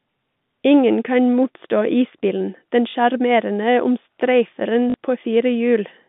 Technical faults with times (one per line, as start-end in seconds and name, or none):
2.90-2.94 packet loss with last packet repeated
4.90-4.94 packet loss with last packet repeated